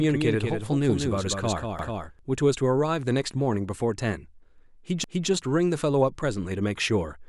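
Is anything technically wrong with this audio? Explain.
Yes, two faults are present. From the start until 2.19 s a doubled audio track runs: a second full-band copy trails by roughly 200 ms at about 5 dB down, likely from a slower capture path. On a spectrogram every feature repeats shifted right, and it cuts off abruptly.

Overlapping chunks appear from 1.79 to 2.04 s and from 5.04 to 5.29 s, about 3 s apart. Each new chunk begins 250 ms before the previous ended, so that slice plays twice, giving a stutter; the waveform shows a duplicated segment and a discontinuity at each join.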